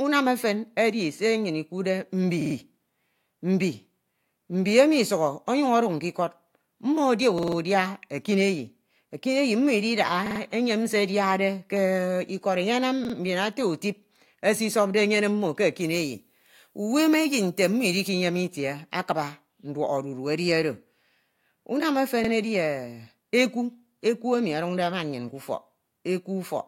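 Repeated buffer stutters hit the speech at 2.42, 7.38 (just before "udia ekineyi ekineyi mmo"), 10.26 and 13.05 s. A 46 ms slice replays with hard joins, which fits a 2048-sample buffer. From 15.81 to 18.09 s, before "itie akuuba", pre-emphasis is left on. Treble is lifted by about 11 dB at 10 kHz, so the sound turns thin and hissy. One more repeated buffer follows at 22.25 s, after "unam ofen".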